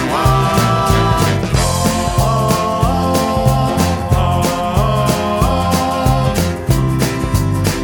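At 6.99 s there is a bit error spike: a single sample whose value has jumped because one bit flipped somewhere in memory or on a digital link, then snaps straight back. It is heard as one sharp, dry tick, unrelated to the surrounding sound. On the waveform it is a lone vertical needle peaking at about -15 dBFS. On a spectrogram it shows as a thin vertical line running across the whole frequency range.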